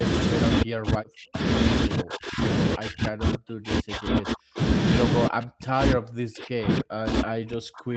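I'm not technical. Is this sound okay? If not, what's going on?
No. Speech suppressed in double talk occurs at 0.63–1.41, 1.87–2.42, 2.76–4.6 and 5.28 seconds to the end. The voice sinks, sometimes nearly to silence, likely because the call's echo canceller mistook it for echo while someone else spoke and turned it down.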